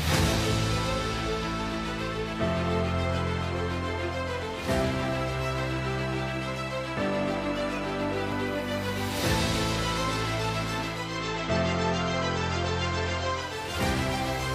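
At 10.83 s the audio crossfades over about half a second into a hissier version of the same station and stays there until 13.77 s: digital radio blending to analogue. The receiver lost its digital stream and fell back to the FM broadcast, so a faint hiss sits roughly 35 dB under the programme. The loudness doesn't shift. Unlike a dropout or a plain low-pass filter, the sound never stops, and the digital sound comes back as smoothly as it left.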